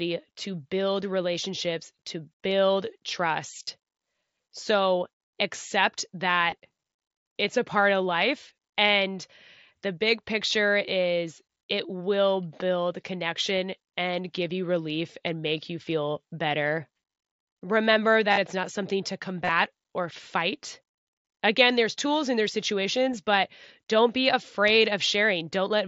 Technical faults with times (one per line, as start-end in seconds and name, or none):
3.60-3.67 concealed Bluetooth headset packet loss
6.51 concealed Bluetooth headset packet loss
18.31-18.37 concealed Bluetooth headset packet loss
19.44-19.52 concealed Bluetooth headset packet loss